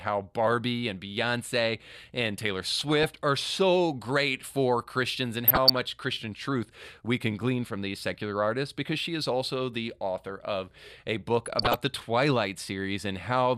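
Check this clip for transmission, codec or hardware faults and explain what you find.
DAB burbling occurs in three bursts: 2.77 to 3.10 s, 5.47 to 5.80 s, and 11.46 to 12.00 s. The speech gains short blips of noise in individual sub-bands. Weak reception let bit errors, a few tenths of a percent, slip past error correction and corrupt MP2 samples across what sounds like a dozen or more frames each time.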